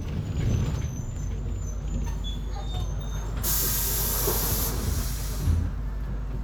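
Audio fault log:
1.17–6.43 s, mains hum: power-line current leaks into the signal path, as through a ground loop or a nearby transformer, adding a steady 50 Hz tone with low harmonics. It runs to the end at roughly the same loudness as the sound itself.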